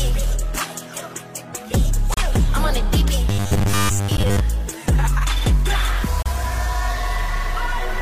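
A gap between stream segments at 2.14 to 2.17 s cuts a hard-edged silence of about 33 ms into the sound. The timestamps of adjacent 2-second segments fail to meet, so the player inserts silence to bridge the missing time, though no audio is actually lost.

Robotic sound from repeated short buffers runs from 3.29 to 4.41 s. The sound turns into a rigid, metallic buzz at 100 Hz that still roughly tracks the underlying material. This is likely because new audio arrived too slowly and the software kept replaying short chunks, which fits a 10 ms buffer. Most of the real audio in that stretch is skipped. Inside this passage, another segment gap at 4.17 s adds a brief silent hole of about 13 ms.

A third gap between stream segments at 6.23 to 6.26 s inserts about 31 ms of silence. The gaps fall at roughly 2-second intervals, matching the segment boundaries.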